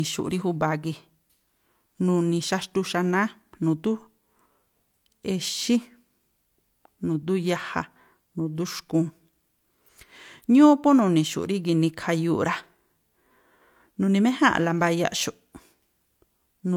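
Speech runs through the whole clip carrying the coding artefacts of a low-bitrate first encoding, most likely HE-AAC at about 48 kbit/s, which was then saved as a high-bitrate MP3: low-bitrate audio saved at a high bitrate. The content reaches about 20.1 kHz, so there is no low cut-off to give it away. What sets it apart from a plain low-bitrate file is that the MP3 re-encoding restores none of the lost detail and adds almost nothing of its own, despite the large file size.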